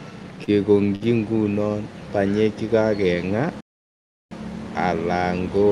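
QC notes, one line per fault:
0.44–0.50 s and 0.95–1.06 s, short stall from a late packet: a packet arrived late, so the receiver held the last sound for 33 ms and then 50 ms before resuming just ahead of "ingunon banyek". Nothing is lost, but timing slips later, with a faint buzzy drawl. The spectrogram shows harmonics smeared flat and the waveform shows repeated identical cycles.
3.60–4.31 s, playback stall: the output drops to silence for about 0.70 s in mid-flow, then carries on. The likely cause is the player running out of data or its thread blocking. The waveform shows a flat line with abrupt edges, and the spectrogram shows a clean blank gap across all frequencies, including the band up to about 12 kHz.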